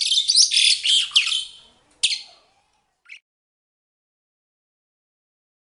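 At 2.59 s a brief noisy smear replaces the sound for about 15 ms. It comes from lost LE Audio frames, likely two 7.5 ms frames, where the LC3 decoder refilled the gap by reusing the last spectrum with randomised signs, beneath a light layer of lossy compression.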